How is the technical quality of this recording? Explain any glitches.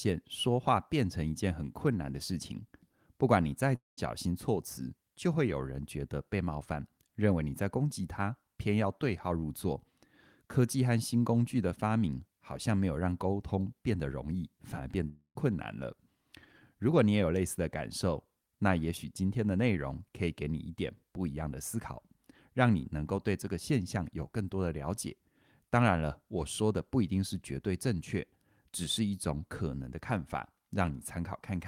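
Two brief dropouts interrupt the speech.

Long network dropout, at 3.75 to 3.99 s and 15.07 to 15.37 s: a likely loss of incoming packets left about 0.22 s and 0.28 s of audio missing. The receiver filled each gap by extending the last sound as a fading buzz or hiss before it sank toward silence. Speech then resumes with that portion gone. On a spectrogram, the harmonics smear into flat horizontal streaks that dim to an empty band. The waveform shows a decaying envelope, then a clean restart.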